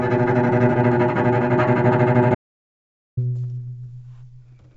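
At 0.76 s there is a skip ahead. Playback jumps forward with no gap between 0.76 and 0.86 s. About a second of sound is missing. The receiver had later audio queued and dropped the stretch in between. The two sides are butted almost directly together. The result is an abrupt discontinuity, as if the recording lurched forward. The delay shrinks by roughly the same second.

From 1.88 to 4.32 s, a jitter buffer speed-up runs. The buffer held more audio than its target. To shrink the delay, the receiver cut many short slices of one or a few pitch periods. Playback runs at about 122% speed. Pitch stays the same. Around half a second is trimmed away in total. The sound feels hurried.

Inside that stretch, from 2.35 to 3.17 s, is an audio dropout to silence. The sound cuts off sharply and returns just as abruptly. The gap lasts about 824 ms. It is silent, with no room tone or background. The cause is likely a lost input, such as a disconnected device, a failed link or a stray mute, while silence kept being written. 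Whatever sounded then is gone.

Throughout, the G.722 call path leaves nothing above 8 kHz, which fits that codec at 64 kbps.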